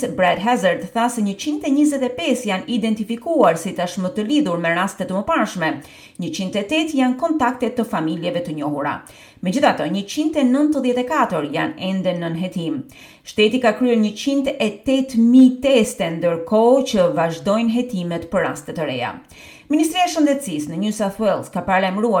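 No technical faults can be heard anywhere here.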